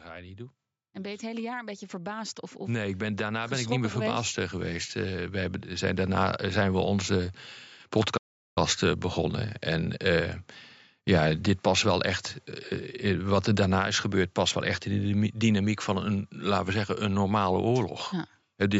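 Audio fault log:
0.93–5.97 s, automatic gain rising: the level creeps up by about 16 dB over roughly five seconds, and the background lifts along with the speech. The gain control decided the input was too quiet and opened up gradually, not in one jump.
8.17–8.58 s, playback stall: the speech cuts to silence mid-flow for about 0.39 s, then carries on. The player likely ran dry of data or had its thread blocked, so nothing reached the output until it caught up.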